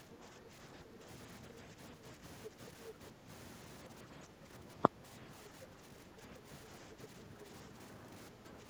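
Speech suppressed in double talk at 0.01–1.07, 1.4–3.28, 4.04–6.47 and 6.9–8.67 s: the speech dips by around 5 dB in patches, likely an echo canceller ducking everything while both sides talk. The other side's voice leaking through at 2.43–2.93 s, somewhat louder than the speech, and briefly at 7.03–7.07 s, somewhat quieter, is likely loudspeaker echo the canceller failed to remove from the microphone.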